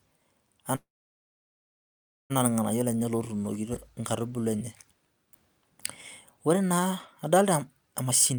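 From 0.75 to 2.32 s the speech stops dead: a brief trailing continuation of the last sound, then about 1.45 s of silence, after which it resumes exactly where it left off, with nothing lost. This is a call audio freeze, likely from delayed packets draining the jitter buffer and forcing the receiver to fill a gap of about 1.55 s.

From 8.05 s to the end at 8.39 s the speech sounds rushed, running at about 138% of normal speed with its pitch unchanged. This jitter buffer speed-up comes from the receiver trimming roughly 150 ms of repeated pitch-period slices to shrink an overfull buffer and cut delay.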